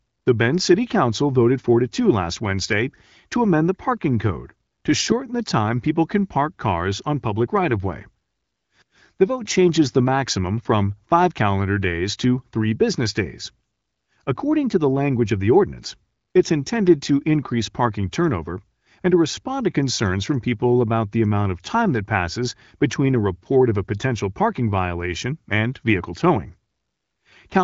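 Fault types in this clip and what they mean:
Nothing stood out as a fault on listening to this speech clip.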